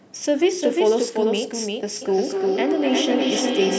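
Throughout, a second full-band copy of the speech trails roughly 400 ms behind at about 5 dB quieter, with no room colour. This doubled audio track likely comes from a slower second capture path.

From 2.02 to 3.78 s, phrases return at roughly 300 ms intervals, thinner and ringing, peaking about 5 dB below the speech. This is feedback echo between two devices: one plays back the other's microphone.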